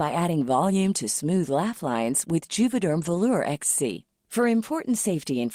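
A lost packet rebuilt from error correction in this speech: between 2.93 and 3.15 s, the decoder played low-bitrate backup copies, leaving 120 ms rougher and noisier but gapless.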